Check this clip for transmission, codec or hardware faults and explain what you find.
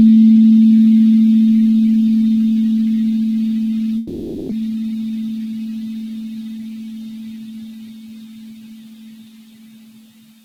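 Two transmission faults appear, one right after the other.

From 3.97 to 4.53 s there is a long network dropout, likely from lost packets. The receiver fills the gap with a fading continuation of the last sound, and about 0.4 s of material never returns. On a spectrogram this looks like a smeared, decaying band with no new onsets.

From 4.61 to 5.47 s a jitter buffer speed-up follows. The receiver trims short pitch-period slices, about a tenth of a second in total, to cut the built-up delay. The sound runs about 11% fast at unchanged pitch. The waveform looks compressed in time, with no frequency shift on the spectrogram.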